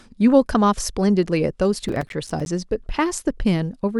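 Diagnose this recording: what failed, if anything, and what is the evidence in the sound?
Processor overload crackle from 1.89 to 2.46 s puts a gritty tearing over the speech, a fault at the driver or buffer stage. The processor repeatedly missed deadlines for buffers of around 5 ms, roughly fifteen in all, each leaving a hard-edged silent gap.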